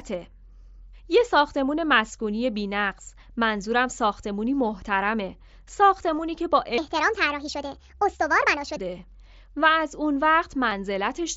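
Speech recorded through a Bluetooth headset on the mSBC codec, with its light graininess on louder syllables. Concealed Bluetooth headset packet loss shows up at 6.17 s and 10.71 s: gaps of about 15 ms and 7.5 ms are patched with repeated waveform, the single loss at 10.71 s nearly hidden, unlike a hard dropout's silence. From 6.78 s to 8.77 s a section at the wrong speed plays 1.5 times fast, pitch and tempo rising together by roughly seven semitones, likely a wrong playback clock rather than pitch shifting.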